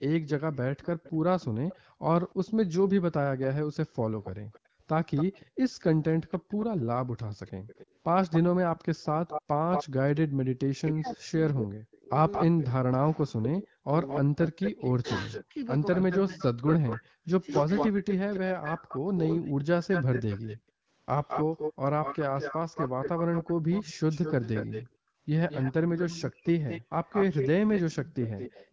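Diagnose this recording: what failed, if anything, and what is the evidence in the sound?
Echo leak, at the call-processing stage: throughout the clip, 0 to 28.66 s, a second copy of the voice trails it by 223 ms, roughly 10 dB down. The likely cause is a loudspeaker-side echo canceller letting residual through. Its fixed delay, unlike room reverb, marks it as returned echo.

Background gated by the echo canceller, also in call processing: room sound drops out in bursts at 1.79 to 7.17 s (about 0.7 s in total), 10.28 to 10.46, 13.83 to 13.87, 17.02 to 17.25, 20.57 to 20.89 and 24.86 to 28.72 s, by about 27 to 40 dB. This is canceller suppression, not a network dropout.

Speech suppressed in double talk, at the same stage: between 10.82 and 18.32 s the voice itself dips or cuts out in pieces, about 3 s in total and down roughly 40 dB at worst. Unlike the background gating, the talker is hit, which points to the canceller failing while both ends spoke; the AMR-WB coding at 15.85 kbit/s is not responsible.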